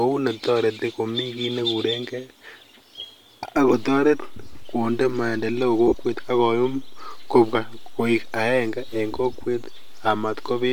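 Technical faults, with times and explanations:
3.57 s onward: DC step. The waveform's zero line jumps once and stays offset to the end, a single low thump under otherwise continuous speech, not a repeated click.
5.88 to 5.94 s and 9.90 s: lost LE Audio frames. The decoder refills gaps with sign-scrambled copies of the last spectrum, smearing tone into noise. The first loss runs about 50 ms; the second is a very brief blip.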